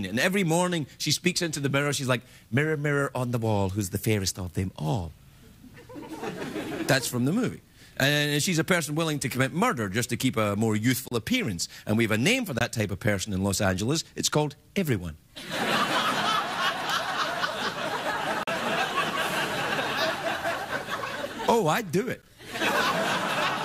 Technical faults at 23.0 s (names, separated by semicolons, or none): none